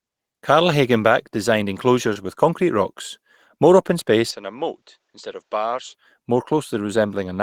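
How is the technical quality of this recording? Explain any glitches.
Two glitches affect the recording. One is a brief dropout, and the other is a change in tone.

From 2.13 to 2.23 s, just before "with concrete rocks more", there is short concealed packet loss. About 20 ms of audio arrived too late. The decoder extended the preceding sound to cover the gap, then blended back, adding about 10 ms. It is heard as a quick smear.

From 4.31 to 5.94 s, after "concrete rocks more open", the sound turns duller and quieter. Nothing is present above 7.9 kHz. The level falls by about 10 dB, and new background noise sits about 40 dB below the signal. There is no gap at the change. The likely cause is the input switching to a poorer device.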